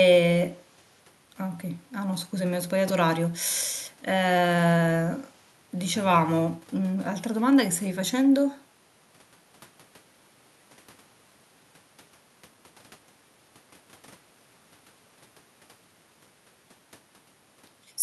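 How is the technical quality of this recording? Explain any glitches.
Nothing in the recording stands out as a glitch, so there's no technical fault here to explain.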